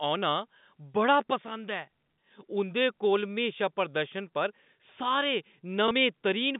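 Speech heard over a telephone-band line, with a single instance of packet loss with last packet repeated at 5.88 to 5.91 s. About 30 ms of sound is replaced by a replay of the preceding stretch, which fits one lost 30 ms packet. The repeat gives a small blip. Unlike a plain dropout, the gap is filled with repeated sound rather than silence. The 150 Hz to 3.7 kHz band heard throughout comes from the telephone line, which is carried with G.711 coding.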